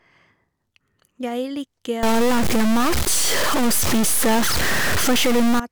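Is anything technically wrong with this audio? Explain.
Yes, the speech has a stuck bit fault from 2.03 s to 5.60 s. The likely cause is one data bit held at a fixed value, shifting about half the samples by a step near -15 dBFS. That produces harsh, buzzy distortion and a noisy floor in pauses. The waveform shows squared-off jumps, and the spectrogram shows broadband hash filling the gaps.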